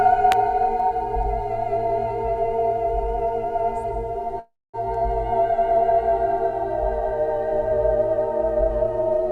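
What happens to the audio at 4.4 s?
From 4.39 to 4.76 s the sound stalls in a call audio freeze. The last moment is stretched into a brief fading buzz that drops to silence for about 240 ms, and then the audio resumes exactly where it left off. That points to delayed packets, likely leaving the jitter buffer empty. Unlike a dropout, nothing is lost. A gap of roughly 0.34 s is inserted instead, so everything afterwards arrives that much later.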